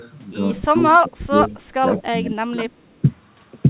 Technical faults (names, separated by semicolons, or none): speech suppressed in double talk